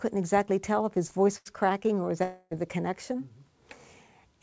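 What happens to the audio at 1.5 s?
Just before then, from 1.38 to 1.47 s, a burst of packet loss is concealed by a fading continuation of the preceding sound. Unlike a plain dropout, about 80 ms of audio is skipped rather than silenced.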